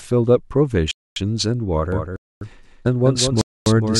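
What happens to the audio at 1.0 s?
A gap between chunks cuts into the speech from 0.91 to 1.16 s. A 250 ms silence sits at the join, which fits audio delivered in one-second chunks. Nothing is lost. The sound stops abruptly, leaves a hard-edged hole, and resumes.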